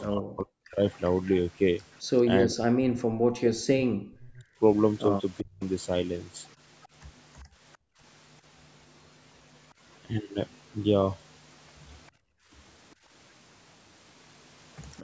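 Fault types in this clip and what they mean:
Speech suppressed in double talk: The speech itself sinks by as much as roughly 40 dB, breaking up in pieces from 0.04 to 0.8 s and again from 2.25 to 5.63 s, where about two seconds are affected in total. The likely cause is an echo canceller that, with both ends talking at once, turned its own talker down along with the loudspeaker echo. Unlike the gating described below, the voice itself drops out here, not just the room sound.
Echo leak: A faint, delayed copy of the speech follows the original by 398 ms. From 1.06 to 2.55 s it sits around 20 dB below the speech, and from 6.82 to 7.77 s it is weaker, around 30 dB down. This is likely loudspeaker sound at the far end getting past its echo canceller and being sent back. A fixed, distinct delay marks it as a separate repeat, not the smooth decaying tail of room reverberation.
Background gated by the echo canceller: The room sound between words drops out abruptly, by about 32 dB between 7.44 and 8.02 s and by about 27 dB between 12.11 and 12.51 s. 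Each dip lasts under half a second before the background returns. The canceller clamps the microphone hard while the loudspeaker is playing. Unlike double-talk suppression, the speech is not what vanishes. The noise floor is, which leaves a sudden dead silence.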